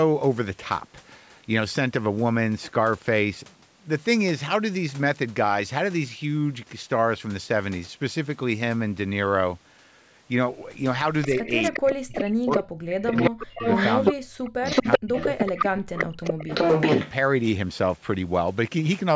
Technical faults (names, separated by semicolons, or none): echo leak; speech suppressed in double talk